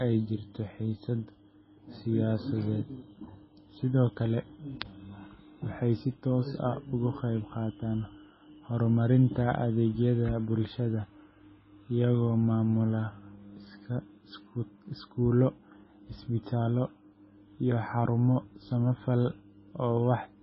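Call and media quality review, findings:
MP3 compression, throughout: speech band-limited at 5.6 kHz, watery swirling and chirpy sibilants, likely from a very low bitrate near 16 kbps starving the encoder, zeroing weak spectral lines.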